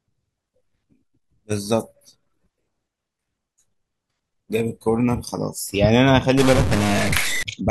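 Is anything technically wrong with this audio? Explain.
Yes. From 6.38 s to 7.43 s the speech turns harsh and buzzy, with a gritty noise floor filling even the gaps, a pattern that points to a stuck bit, likely one pinned high or low in the converter or a data line. Many samples are pushed off by that bit's fixed weight, around -20 dBFS, so the waveform shows square-edged offsets and jagged steps, and the spectrogram shows broadband smearing across all frequencies for that stretch.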